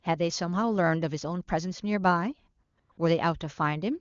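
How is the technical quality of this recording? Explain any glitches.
The speech carries one recurring glitch: AMR comfort noise in three short bursts, from 2.63 to 2.77 s, 2.79 to 2.89 s and 2.91 to 2.97 s. The wideband AMR coding sounds clean, which fits its highest rate. In each burst the phone judged the line silent and stopped sending speech frames, so the receiver substituted smooth synthetic noise. The real background drops out for 140, 100 and 60 ms, giving a brief flickering switch in texture.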